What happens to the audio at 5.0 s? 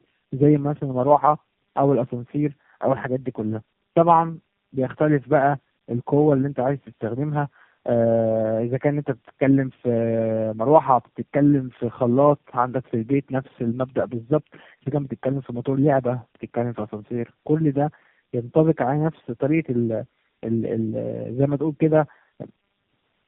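At 5.0 s the speech carries tandem speech coding that runs through the whole clip: it sounds like three low-rate speech codecs in a row, each re-encoding the previous one's decoded output. The result is rough, muffled and warbly, with nothing above 3.5 kHz.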